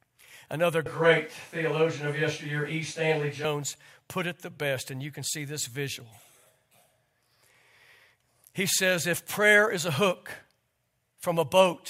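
From 0.86 s to 3.45 s the speech suddenly turns roomy and hollow, losing bass, and a background of room noise rises to roughly 30 dB below the speech, while the overall level stays about the same. At 3.45 s the close, full sound returns just as abruptly. This is a switch to a distant microphone: the close microphone's signal likely dropped out, so a microphone further from the talker briefly carried the recording.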